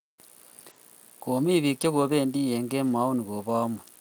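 Lost packets rebuilt from error correction occur at 0.69 to 0.71 s and again at 2.83 to 2.93 s. Each lost packet was replaced by the low-bitrate copy carried in the next one, so the speech never drops out but turns briefly rougher and noisier. The second patch, about 60 ms, fits several separate packets lost.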